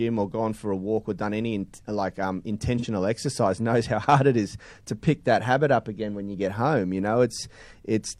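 At 2.78 to 2.85 s, after "any in like um", AAC frame loss with concealment refills a 43 ms gap from earlier spectrum. It sounds smeared and shows as a blurred spectrogram slice.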